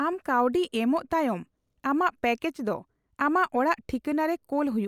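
Listening to this speech recording, nothing stood out as a technical problem.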